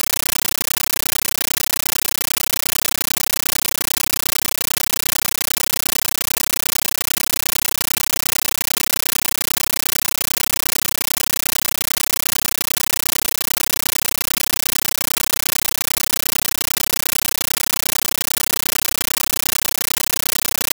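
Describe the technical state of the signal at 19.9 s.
At 19.9 s the signal is still a compressed stream played as audio, a fault running through the whole clip. AC-3 data goes undecoded into the output as if it were samples. That gives bursts of loud static about 13.3 ms long, 31.25 times a second, with silent padding between, which fits a 640 kbps stream. Unlike random noise or distortion, the chatter keeps a strict frame-locked rhythm.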